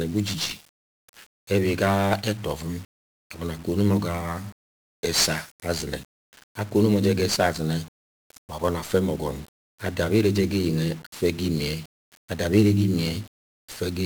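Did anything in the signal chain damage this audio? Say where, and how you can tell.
Yes, the codec stage. The whole speech clip has the fuzzy, crackly grain and hiss-buried treble of 1-bit DFPWM compression, which fits a stream of roughly 48 kbps. With one bit per sample nudging an adaptive level up or down, the quantisation noise is heavy and broadband.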